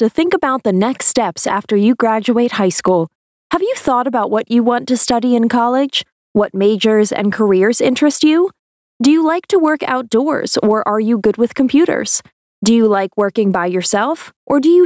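The audio has passed through call microphone processing, with nothing above 8 kHz, and it shows gain pumping throughout. The gain swings by about 15 dB. The likely cause is input gain set far too high, with a fast limiter pulling it down on every peak. Loud and soft parts sit close in level, so the sound is squashed.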